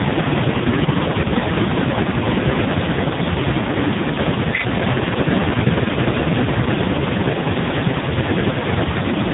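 From start to finish the speech carries AMR narrowband mobile codec damage, with nothing above about 3.8 kHz and a heavily buzzy, synthetic tone that suggests the lowest 4.75 kbps mode, unlike plain low-pass filtering.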